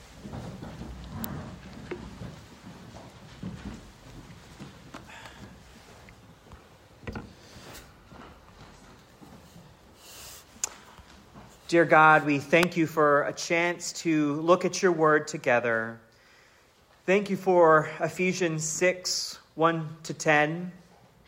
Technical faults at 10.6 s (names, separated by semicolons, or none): none